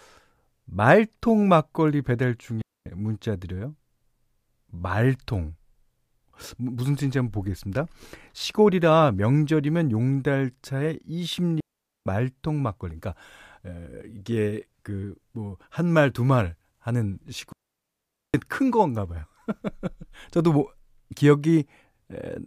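At 2.62 s, 11.60 s and 17.52 s, digital wireless dropouts mute the speech for 0.25 s, 0.46 s and 0.82 s. The receiver loses the data stream and fades to near silence. Unlike analogue dropouts, these leave no noise bursts.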